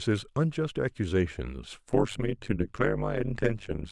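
From 1.93 s to the end, frames of the speech were windowed and overlapped with an uneven overlap-add, so gain swings about 60 dB once per frame. This overlap-add ripple gives a harsh, metallic buzz at around 100 Hz, with extra tones around each note.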